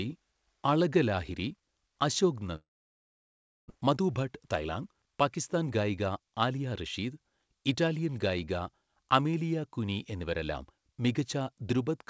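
Long network dropout, 2.56 to 3.72 s: the sound fades into a brief buzz, then about a second of silence, likely from lost packets. Roughly 0.6 s never returns.

Jitter buffer speed-up, 3.76 to 6.84 s: to drain the built-up delay, short pitch-period pieces are cut repeatedly, so speech runs 117% fast, hurried but unchanged in pitch.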